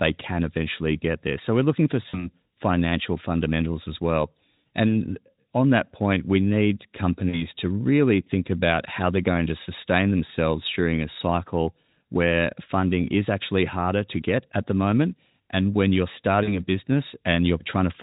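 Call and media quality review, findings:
VoIP packet loss concealed by the speech codec at 2.09–2.29, 7.30–7.45, 11.13–11.16 and 16.43–16.53 s: buzzy, fading smear over 40 ms gaps (20 ms at 11.13), with a weak tail while the Speex decoder recovers.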